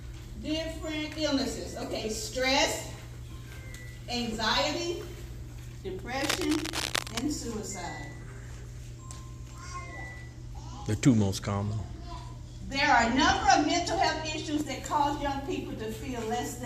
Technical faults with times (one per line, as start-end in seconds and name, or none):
6.21-7.23 cable scratch noise